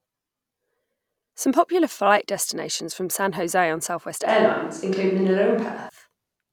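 A short speech recording with a switch to a distant microphone from 4.29 to 5.89 s. Over that stretch the voice abruptly turns roomy and hollow and loses low end, then snaps back just as suddenly. The level stays about the same, and background noise sits roughly 40 dB below the speech. The likely cause is that the close microphone's signal dropped out and a mic further from the talker, such as a camera's, was used instead.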